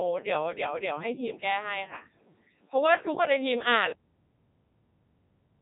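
From start to finish the speech sounds robotic and buzzy, with nothing above about 3.8 kHz. This is heavy Codec 2 vocoder damage: the voice is resynthesised from sine waves using only pitch, voicing, energy and envelope, consistent with its 3.2 kbit/s mode.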